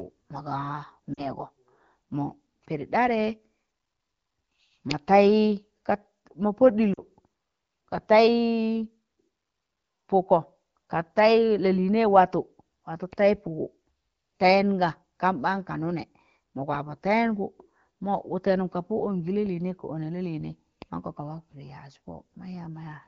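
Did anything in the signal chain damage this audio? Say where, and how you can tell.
Yes. Lost AMR speech frames on the radio link at 1.13 to 1.25 s and 6.94 to 7.00 s: brief dips toward near silence where the AMR-WB decoder extrapolated over gaps fitting two 20 ms frames, unlike a hard dropout or click.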